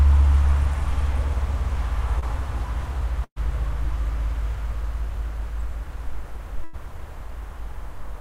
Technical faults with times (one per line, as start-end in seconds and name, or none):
2.19-2.24 short concealed packet loss
3.24-3.38 burst of packet loss
6.64-6.75 burst of packet loss